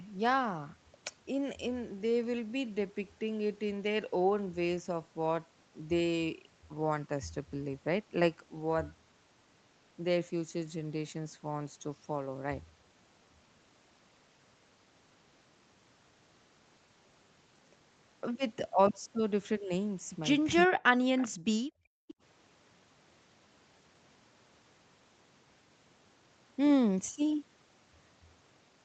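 A speakerphone echo canceller struggling with both sides of a call is behind every fault in this speech recording, which also passed through an Opus call path whose band ends at 8 kHz. From 20.66 to 20.83 s, speech suppressed in double talk is likely: with the far end talking at the same moment, the canceller could not tell the near voice from loudspeaker echo and turned everything down. For roughly 150 ms the voice sinks by around 40 dB before recovering. Just after, at 21.18 to 21.28 s and again at 22.09 to 22.14 s, there is echo leak, most likely from one side's loudspeaker pickup slipping past its canceller. A faint copy of the voice returns 389 ms late, at around 20 dB and then some 25 dB below the speech, as short scraps rather than a sustained repeat. Between 21.3 and 22.16 s the background is gated by the echo canceller: while the loudspeaker plays, the canceller clamps the microphone hard, so the room tone drops by up to about 40 dB across roughly 700 ms in total, until the canceller releases and the ambience comes back.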